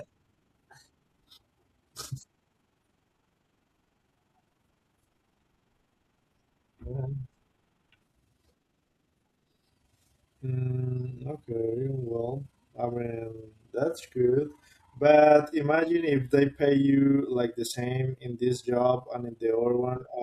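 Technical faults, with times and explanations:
Throughout: overlap-add ripple. The level of the speech pulses up and down by about 6 dB at a rate of around 20 times a second, a rough tremolo. The windowed frames were overlapped and summed without constant gain, so loudness dips once per frame.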